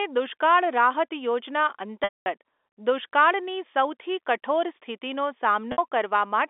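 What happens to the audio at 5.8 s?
Around 60 ms of the stream went missing from 5.72 to 5.78 s, just after "દુષ્કાળની સૌથી કઠોર સ્થિતિનો", a gap that fits three lost packets. The receiver covered this packet loss with pitch repetition, looping the last pitch period it held and fading it down. Over the narrow telephone band of the G.711 line, the result is a brief, slightly buzzy sustained tone where the speech should continue, before normal speech cross-fades back in.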